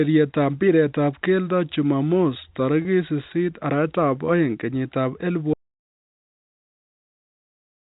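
At 2.82 s, right after "mpiretab keldo jumamos", there is a packet loss with pitch repetition. About 30 ms of speech went missing, which fits a single lost packet. The receiver filled the gap by repeating the last pitch period. Because the gap is so short, the repeat does not have time to fade to silence. It sounds like a brief held, buzzy sound before the speech carries on.

At 5.54 s the audio drops out to silence. The sound stops mid-flow and never returns before the clip ends. The gap is silent, with no room tone and no telephone-band hiss from the G.711 A-law coding that carries the rest of the speech. The input was likely lost through a disconnected device, a failed link or a mute while recording continued. Whatever followed is gone.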